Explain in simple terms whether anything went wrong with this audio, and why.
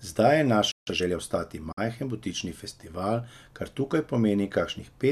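A playback stall occurs at 0.72 s. The speech simply stops and the output goes silent for about 0.16 s, until 0.87 s, then picks up again. A gap like this most likely means the player ran short of incoming data, or was briefly held up doing something else, so it had nothing to send to the speakers until it recovered.

Time-compressed catch-up follows straight after, from 0.87 s to 1.17 s. To win back the time lost in the stall, the player hurries through the speech at roughly 1.5 times normal speed. It does this by trimming tiny slivers out of the audio and blending the joins, rather than speeding up the tape, so the pitch stays the same, but the speech sounds rushed for that moment.

A digital broadcast dropout comes at 1.72 s, lasting until 1.78 s. The sound fades out over about 8 ms, leaving a hole of roughly 48 ms before it returns. The receiver lost or rejected a short run of the digital signal, which fits a couple of damaged frames, and muted rather than play garbage. 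Whatever was sent during that gap is gone for good.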